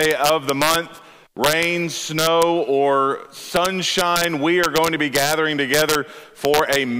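Integer overflow appears in seven stretches: 0.01–0.76 s, 1.44–1.64 s, 2.19–2.43 s, 3.56–4.24 s, 4.64–5.33 s, 5.74–5.95 s and 6.45–6.76 s. In each, the level runs roughly 2 dB past the integer limit. Instead of being held at full scale, the peaks wrap around to the opposite sign and jump across the whole range. The result is harsh, violent cracks on the loudest parts of the sound, far sharper than ordinary clipping.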